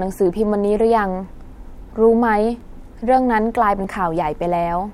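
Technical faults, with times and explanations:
0.13–3.84 s, clock drift buffer slips: four clicks land in the speech at a steady 1.24 s spacing. This is likely two devices whose clocks disagree by around 500 ppm, so a buffer between them drifts until a few dozen samples are dropped or repeated, jolting the waveform.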